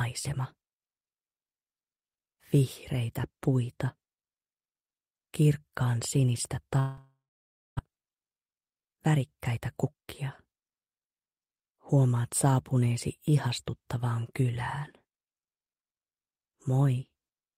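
At 6.79 s the sound breaks off into a fading buzz or hiss and then about 0.59 s of silence before resuming at 7.81 s with roughly 0.6 s of audio gone, likely a long network dropout. Inside that fill, at 6.98 s, a brief click-like buzz comes from a repeated buffer: one 2.9 ms piece of a 128-sample buffer plays twice more because new audio arrived late. From 7.89 s to 11.73 s the audio runs noticeably hurried at unchanged pitch, about 110% speed. That is jitter buffer speed-up trimming around 0.4 s of built-up delay by cutting short pitch-period pieces.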